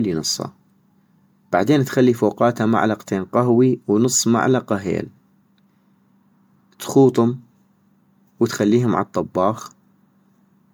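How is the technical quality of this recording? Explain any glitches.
The quality is held back by a single fault that runs through the whole speech recording.

Generation loss, throughout: the sound is swirly, smeared and hollow, with blurred attacks, most likely from being re-encoded around seven times with MP3. The damage is worse than 128 kbit/s alone would explain, and each pass quantised afresh on a shifted frame grid, stacking noise and spectral holes.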